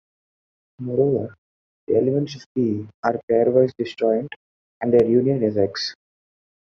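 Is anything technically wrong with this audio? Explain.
Yes. At 5.00 to 5.02 s, after "are pairwise disjoint and" and before "union is", a sudden voltage pulse, likely from a plug, switch or static discharge, enters the chain. It is heard as a single loud pop, a few decibels above the speech, which continues underneath.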